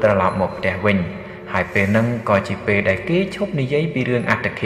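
Nothing in this sound stands out as a technical problem; it just runs along the way it should.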